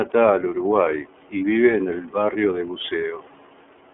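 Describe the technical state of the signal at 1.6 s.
At 1.6 s the sound carries iLBC codec coding, present across the whole clip. Each 30 ms frame's excitation is coded independently, giving a plainly rough, synthetic texture, which fits the 13.33 kbps mode. This sets it apart from a plain telephone band filter, which narrows the band to about 300 Hz to 3.4 kHz, with nothing above 3.6 kHz, but leaves no coding roughness.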